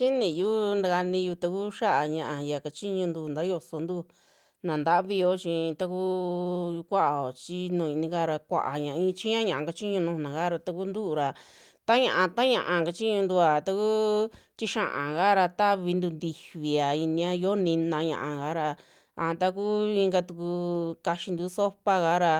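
Nothing stood out as a technical problem when listening to the speech in this recording.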